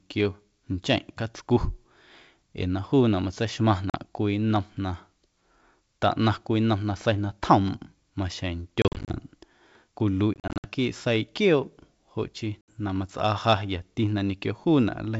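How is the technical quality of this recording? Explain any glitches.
The recording has four dropouts. Packet loss on an ADPCM call occurs at 3.90–3.97 s (40 ms missing), 8.82–9.17 s (180 ms scattered across 320 ms), 10.34–10.68 s (190 ms across 300 ms) and 12.61–12.80 s (70 ms). Lost packets leave hard-edged silent gaps, and the decoder's adaptive predictor and step size drift from the sender's, so the speech returns slightly distorted until it resynchronises within tens of milliseconds. The two longer bursts sound choppy, consistent with around twenty packets lost in each, against the clear G.722 wideband sound.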